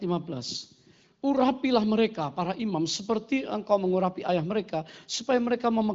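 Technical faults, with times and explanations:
Nothing here counts as a fault; the speech simply carries the usual HD Voice bandwidth, with nothing above about 7.5 kHz, just as an AMR wideband call running at one of its higher rates should sound.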